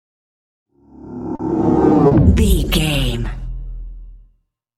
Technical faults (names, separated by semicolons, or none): short concealed packet loss